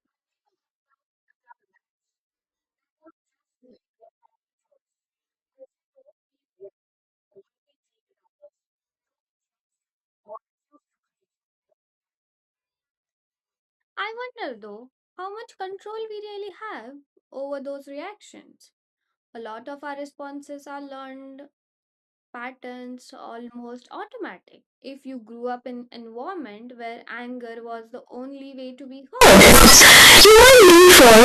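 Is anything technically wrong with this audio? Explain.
Yes. From 29.21 s to the end at 31.24 s, the speech turns into very loud, harsh distortion. Quiet moments blast as loudly as the rest. The likely cause is signed and unsigned mixed up in the 16-bit samples, flipping the top bit so every zero crossing jumps across the full range.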